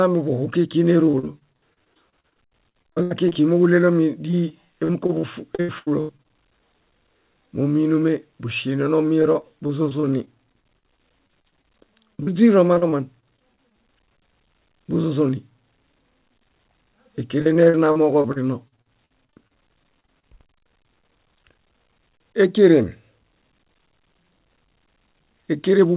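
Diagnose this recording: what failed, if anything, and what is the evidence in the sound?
Repeated packet loss on the network leg hit in four bursts: 1.06–3.37 s, 4.31–6.26 s, 9.22–13.74 s and 17.41–20.25 s. The receiver patched each hole by extending the previous sound, with gaps up to 84 ms. The speech comes out choppy and robotic.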